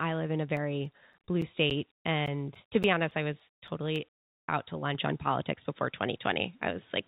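From 0.57 s to 3.96 s the speech carries CD scratch ticks: thirteen short clicks at a steady rate of roughly four a second, the longest lasting about 10 ms. A blemish on the disc corrupted more data on each revolution than error correction could rebuild, so the player patched or muted those samples. On a waveform they appear as small, evenly spaced notches or spikes. On a spectrogram they form thin vertical lines that repeat at regular intervals.

Between 4.18 s and 4.48 s, a 300 ms stretch of pause sounds like comfort noise in place of the background. The ambient detail drops out and is replaced by a smooth, featureless hiss about 19 dB quieter than before. The real background had been sitting about 66 dB below the loudest parts. The likely cause is discontinuous transmission, with the receiver synthesising noise while the sender was silent. A spectrogram shows a flat, textureless band sitting noticeably lower.

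From 4.95 s to the end, the sound turns duller and boxier, with nothing above 3.8 kHz, and the overall level shifts by around 5 dB. The change happens without any silence at the switch. A new noise floor appears, roughly 40 dB below the signal. This points to the input being switched to a poorer device, likely a headset or lesser microphone. On a spectrogram the upper edge drops slightly below the 4 kHz ceiling the call codec already imposes throughout.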